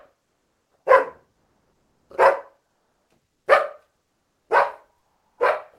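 From 1.33 to 2.09 s, and again from 4.99 to 5.39 s, the background in these everyday sounds is replaced by comfort noise: a smooth, featureless hiss standing in for the real ambience, which sits about 55 and 59 dB below the loudest parts. The level shifts by about 1 dB in the first gap and about 4 dB in the second. The likely cause is Opus discontinuous transmission, with the receiver synthesising noise while the sender goes quiet.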